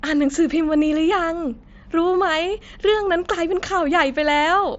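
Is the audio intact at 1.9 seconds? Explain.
Yes, the speech at 1.9 s is intact, passing through the wideband Bluetooth mSBC headset codec path with its band ending near 7.7 kHz.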